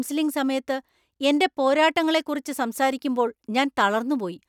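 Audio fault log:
No fault to log in the clip.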